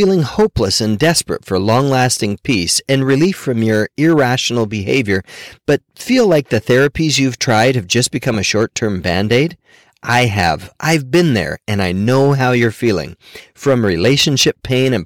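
Hard clipping runs through the whole speech clip. The signal was driven about 9 dB beyond what one stage in the chain could pass, so its peaks were cut off flat. Around 3 percent of the waveform hit that ceiling, mainly on the loudest syllables. Those flattened tops add harmonics high in the spectrum, which come through as distortion and crackle wherever the speech peaks.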